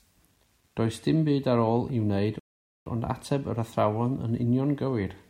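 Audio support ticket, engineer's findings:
Grainy, signal-following distortion on the speech throughout, worst on quiet syllables and decays, which roughen or sputter rather than fade cleanly. Error sits about 45 dB below the signal, consistent with roughly 10-bit rounding. Likely cause: low bit depth without dither somewhere in the capture or conversion path.

Rebuffering stall from 2.39 s to 2.86 s. Hard dropout to silence, then speech resumes at the exact point it stopped, with no content missing and about 0.47 s added. Player buffer underrun: playback halted until more data arrived from the stream.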